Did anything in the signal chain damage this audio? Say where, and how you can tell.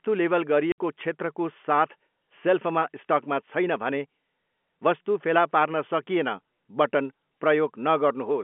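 Yes, at the network stage. Packet loss filled with silence cuts a hole from 0.72 to 0.78 s, just before "क्षेत्रको साथ सेल्फमा स्टकमा". The speech drops to dead silence for 60 ms, with hard edges. That length fits three lost 20 ms packets. The receiver had no audio to play for that span and inserted silence, so the waveform stops abruptly. The G.711 telephone coding, heard as the narrow 200 Hz to 3.4 kHz line band, surrounds the gap.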